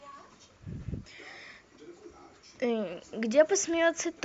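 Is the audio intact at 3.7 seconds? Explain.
Yes, at 3.7 seconds the speech comes through intact, with the light Bluetooth LC3 coding likely in the path leaving no audible fault at that point.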